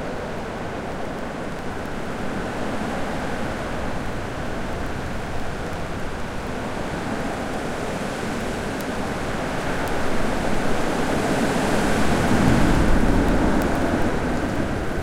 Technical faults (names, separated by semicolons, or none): word clock ticks